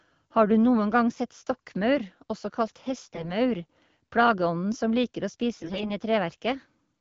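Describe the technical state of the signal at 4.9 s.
At 4.9 s the speech is intact, with nothing audible beyond the light coloration of the wideband HD Voice codec that carries the whole recording.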